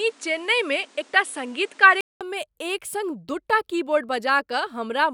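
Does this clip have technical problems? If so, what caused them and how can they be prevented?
Yes. The input was likely switched to a poorer device, used from 0.0 to 2.21 s. That stretch of speech is dull, with nothing above 10.7 kHz, a new noise floor roughly 35 dB below the signal, and a level about 5 dB different, ending in a 200 ms silence at the switch. Locking the recording input to one chosen microphone prevents this.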